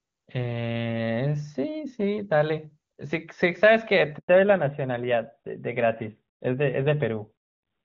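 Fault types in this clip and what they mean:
Handover gap: at 4.18 s the call moves between networks and no speech frames arrive, so the sound fades within a few tens of milliseconds and stays silent for 100 ms. Unlike a dropped packet, there is no smeared or repeated fragment, only clean silence.
Fallback to narrowband: from 4.28 s to the end, nothing above 4 kHz remains, and the sound turns duller and rougher. Unlike a brief low-pass glitch, the earlier wideband sound, which fits HD Voice near 23.85 kbit/s, never returns after the gap.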